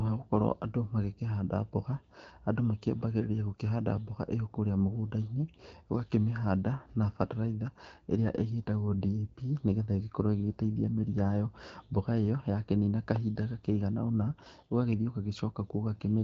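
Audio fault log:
7.54 to 11.31 s and 14.22 to 15.23 s, AMR rate drop. The speech turns rougher and more synthetic, with no gap and the band unchanged. Fewer bits go to the voice, which fits a step from 12.65 to 8.85 kbit/s. Clarity returns after each span.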